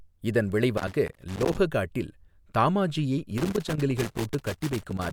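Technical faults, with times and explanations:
0.77 to 1.58 s and 3.38 to 5.13 s, loose connector crackle: a worn or dirty contact in the speech path keeps making and breaking as it shifts, chopping the signal into irregular scratchy bursts, and the second stretch runs right to the end.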